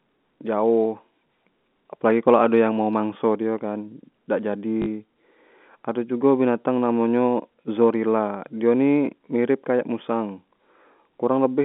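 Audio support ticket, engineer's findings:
Packet loss with last packet repeated, 4.82–4.86 s: 40 ms robotic stutter, fits two 20 ms packets replayed. Waveform shows duplicated blocks. Spectrogram shows a 50 Hz buzz.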